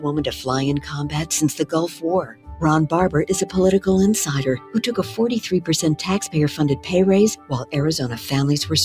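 Throughout, the sound pumps and thins: level swings of around 10 dB come and go as a noise suppressor applied to music or sounds, built for speech, treats sustained tones, ambience and reverb as noise and pulls them down while attacks pass.

The sound cut by the noise suppressor is clearest at 0.81–0.96 s (about 8 dB), 1.6–2.04 s (about 14 dB), 2.22–2.57 s (about 15 dB), 4.58–4.76 s (about 10 dB), 5.02–5.19 s (about 9 dB) and 7.36–7.75 s (about 14 dB). There the sound sinks or its decay is clipped short.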